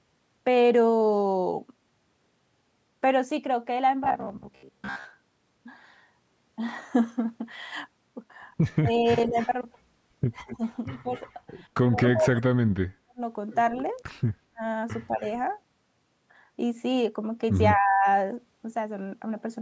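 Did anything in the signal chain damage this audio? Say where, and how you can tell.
Yes. From 4.04 to 5.05 s the sound turns into a rigid, metallic buzz at 66.7 Hz. Most of that second is repeated material. That points to the driver or buffer stage, likely re-playing the last 15 ms block whenever new audio arrived late.

The call processing also shows speech suppressed in double talk, at 8.78 to 9.37 s, 10.42 to 13.21 s, 14.51 to 15.22 s and 17.74 to 18.06 s. The level dips by up to about 30 dB, in pieces. The echo canceller likely could not separate its own talker from the loudspeaker echo and turned both down while both sides spoke.

There is echo leak in the same stage, at 9.37 to 9.49 s, 10.48 to 11.34 s, 12.35 to 12.42 s and 15.22 to 15.29 s. A delayed copy trails by 232 ms, and 259 ms in the last one, about 15 to 25 dB down. Loudspeaker pickup likely escaped cancellation.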